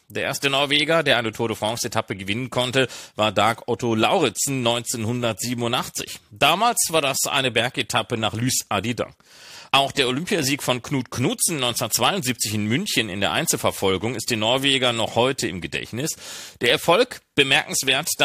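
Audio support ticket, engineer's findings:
No faults found in clip.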